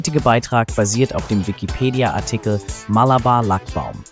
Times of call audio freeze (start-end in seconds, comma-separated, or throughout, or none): none